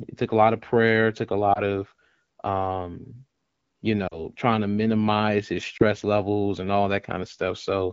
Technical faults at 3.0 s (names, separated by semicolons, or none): none